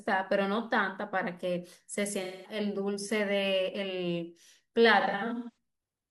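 AAC frame loss with concealment hits at 2.23 to 2.59 s, a gap of about 213 ms that fits five lost frames. The decoder rebuilds the missing stretch from the last intact spectrum, so the speech turns smeared and noisy. From 5.00 to 5.54 s, about 384 ms drops out in scattered bursts, the longest near 150 ms. Each burst briefly sounds phasey and blurred before the audio returns.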